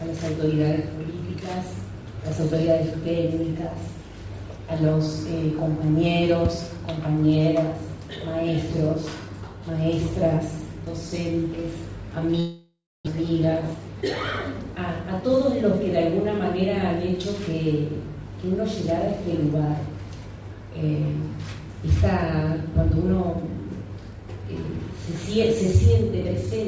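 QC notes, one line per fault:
12.40–13.09 s, long network dropout. The sound breaks off and the last instant is drawn out as a fading buzz, then 270 ms of silence. The audio resumes slightly later, with 600 ms missing. Likely lost packets, with the gap filled by the receiver.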